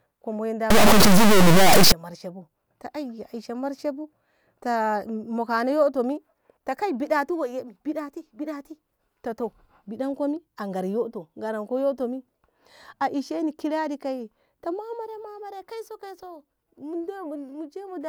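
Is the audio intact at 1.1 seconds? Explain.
No. At 1.1 seconds the speech sits inside a stuck bit fault that runs from 0.70 to 1.92 s. The sound turns harsh and buzzy. The likely cause is one data bit held fixed by a faulty line or converter. About half the samples then land off by that bit's weight, a step of around -10 dBFS. Because the bit also flips with the sign of small values, quiet gaps fill with noise.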